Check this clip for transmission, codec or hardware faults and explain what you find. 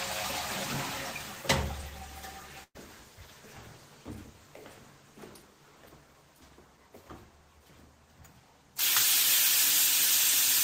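One transmission fault is present: a burst of packet loss from about 2.63 to 2.77 s. A run of packets failed to arrive in time, so about 120 ms of audio never reached the player. The receiver covered roughly 110 ms of that hole by extending the last sound it had and fading it down, and about 60 ms of it ends up silent. The result is a brief smeared, dying tail and a dropout, after which the sound picks up further along with that stretch missing.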